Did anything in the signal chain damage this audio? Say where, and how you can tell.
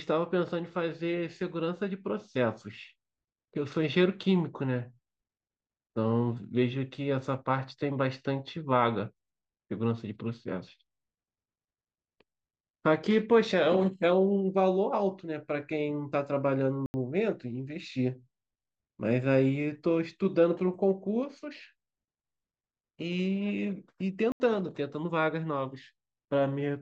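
Yes. There is a block of digital silence from 16.86 to 16.94 s and another from 24.32 to 24.40 s, each an 80 ms hole in the speech. The stage is the driver or buffer. At each point the output buffer was not filled in time, so the gap held silence. The signal drops to silence and returns with no fade.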